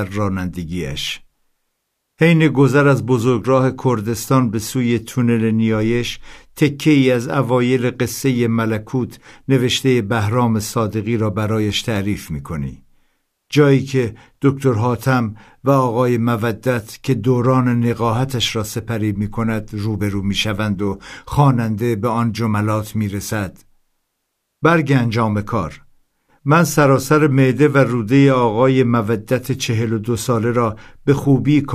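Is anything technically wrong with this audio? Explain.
No, nothing technically wrong can be heard in this speech recording. It carries no audible fault anywhere.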